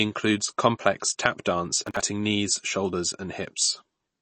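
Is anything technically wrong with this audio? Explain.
Yes. Throughout the speech, nothing is heard above about 8.3 kHz and there is a plainly audible watery swirl, likely MP3 compression at a low bitrate near 32 kbps. Unlike a plain low-pass filter, it also flickers.

From 1.87 to 2.02 s, just after "complex tap dance", there is processor overload crackle. Around thirty buffers of a few milliseconds each were skipped in a row, producing gritty tearing rather than one clean dropout.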